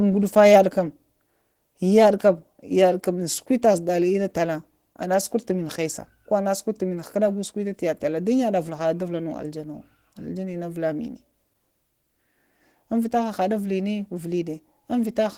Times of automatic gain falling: none

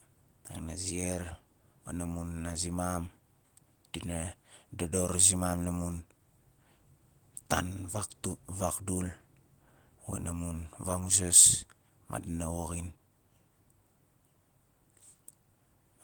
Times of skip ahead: none

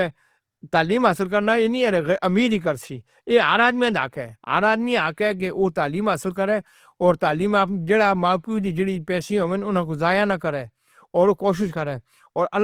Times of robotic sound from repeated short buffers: none

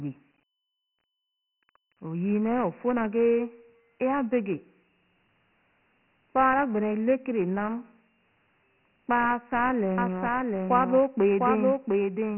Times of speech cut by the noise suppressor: none

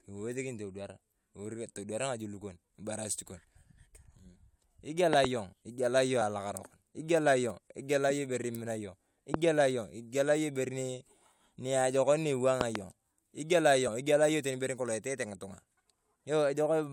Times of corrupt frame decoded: 8.10

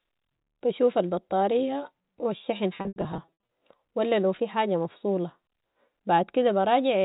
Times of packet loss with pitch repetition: 2.77-3.32

